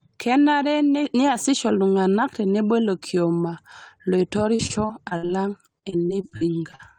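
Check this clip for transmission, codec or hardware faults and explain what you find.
Two stretches of repeated packet loss (robotic sound) stand out, from 4.55 to 5.31 s and from 5.79 to 6.81 s. Packets went missing again and again, and each hole of up to 59 ms (first stretch) or 40 ms (second) was bridged by extending the previous sound. That filler covers about a quarter of the first span and about a fifth of the second, so the speech turns choppy, with pieces missing. Unlike a single dropout, the holes come in quick succession, six and then eight of them.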